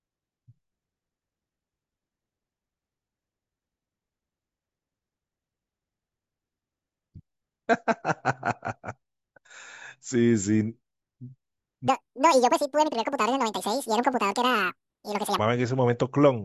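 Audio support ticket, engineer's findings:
Wrong sample rate, 11.88–15.39 s: speech doubles in speed and jumps an octave together, fitting 16 kHz audio played at 32 kHz; linked pitch-tempo change rules out pitch shift.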